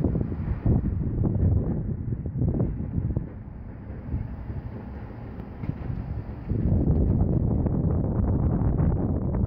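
No technical faults can be heard at any point in the signal, which runs with no break or disturbance.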